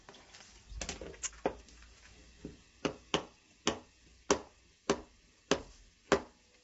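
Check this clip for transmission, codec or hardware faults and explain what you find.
One codec fault runs through the whole clip: it sounds like low-delay AAC compression, likely AAC-ELD. The sound is plainly rough and grainy, with noise filling the gaps between harmonic components and nothing above 7.8 kHz. Short frames give the encoder poor frequency resolution, so tonal detail smears into noise, and the damage points to a low bitrate around 24 kbps. A simple low-pass filter would dull the top band but leave the sound clean, without this graininess.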